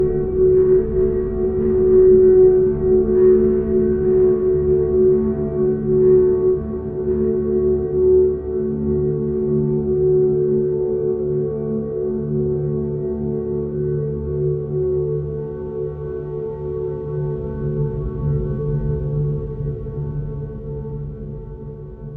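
A recording of everyday sounds, with no technical fault to be heard anywhere in it. Nothing in the audio calls for a time or a cause.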